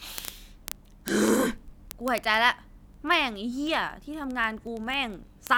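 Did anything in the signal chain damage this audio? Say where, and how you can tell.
Yes. Word clock ticks on the digital link: sharp ticks about every 30 ms from 0.12 to 5.57 s, each an unlocked receiver slipping one sample. The steady spacing sets them apart from random dropouts.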